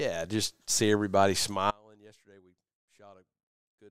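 A speech recording that cuts out abruptly at 1.71 s and never recovers. From there to the end, only a faint trace of the signal remains, roughly 30 dB below its normal level, with no fade or natural pause leading into it. This is an audio dropout to a faint residue. The wanted signal was likely lost somewhere upstream while the path after the break stayed live, so a weak leak of the sound still gets through.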